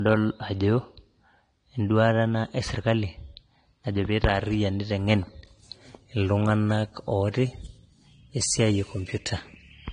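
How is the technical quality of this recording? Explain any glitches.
The speech has one fault running through the whole clip: nothing above 9.7 kHz, and the top end sounds thin. This is likely low-bitrate audio saved at a high bitrate. A low-bitrate encoding, around 32 kbit/s AAC, removed that band, and a later 320 kbit/s MP3 copy kept the loss. Unlike a genuinely low-bitrate file, the second encoding adds almost no artefacts of its own.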